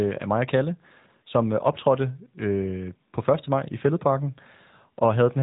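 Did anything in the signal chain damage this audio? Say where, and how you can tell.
Yes, at the codec stage. Throughout, the speech sounds narrow and plainly buzzy, with nothing above 3.8 kHz. This is the AMR narrowband mobile codec rebuilding the voice from a few pulses, which fits a bitrate near 10 kbps.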